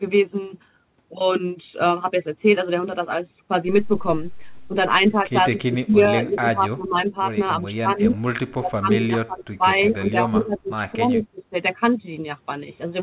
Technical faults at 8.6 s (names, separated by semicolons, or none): speech suppressed in double talk